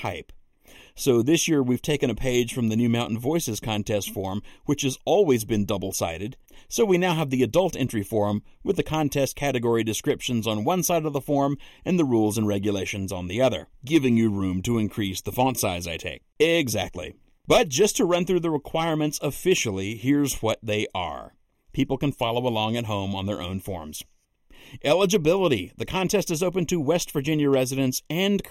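Throughout the recording, one channel lags the other by a fraction of a millisecond, and summing them to mono causes channel delay (comb filtering). Cancellation cuts fixed notches starting around 1.5 kHz and recurring at even intervals above, leaving the speech hollow and phasey.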